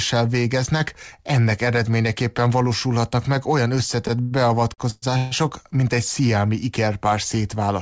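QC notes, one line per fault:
4.21 to 4.48 s and 4.74 to 4.81 s, short stall from a late packet: the sound is held and stretched for about 98 ms and then 42 ms, with a faint buzz or dip, before carrying on. A packet came late, the jitter buffer ran dry, and the receiver extended the last sound until it arrived, so nothing is lost.
4.90 to 5.05 s and 5.17 to 5.34 s, call audio freeze: the sound turns into a fading buzz or hiss for about 122 ms and then 140 ms, the first ending in a brief silence, before resuming where it stopped. Packets were likely held up in transit, emptying the jitter buffer, so a gap was inserted rather than anything dropped. The call codec cuts everything above 8 kHz, which fits G.722.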